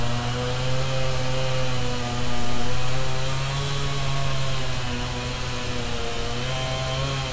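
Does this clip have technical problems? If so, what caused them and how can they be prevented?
No, there's nothing technically wrong to point at here, so there's no cause to track down and nothing that needs preventing.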